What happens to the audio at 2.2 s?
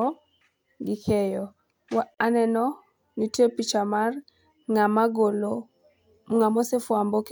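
The speech drops into a brief silence of about 42 ms, from 2.14 to 2.18 s, then resumes where it stopped: a gap at a join of encoded pieces, left by untrimmed encoder delay and padding.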